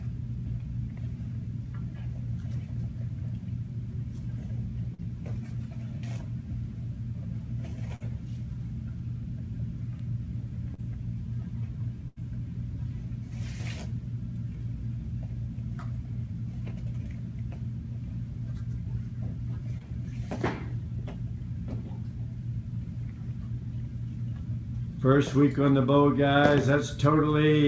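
The audio carries the signs of a wideband call link, with nothing above 8 kHz, which fits G.722, and three kinds of fault. Bit error spikes at 3.28 s and 10.00 s are single sharp ticks from flipped bits; the waveform shows a lone vertical spike and the spectrogram a thin full-height line. Short concealed packet loss at 4.94–5.00 s, 7.96–8.02 s, 10.74–10.80 s and 19.78–19.82 s causes brief smears where the receiver extrapolated over 20–40 ms gaps; the spectrogram shows stretched, blurred texture. A burst of packet loss at 12.08–12.18 s drops about 80 ms, filled with a decaying held tone or hiss that looks like smoothly fading, repetitive bands before the audio resumes further on.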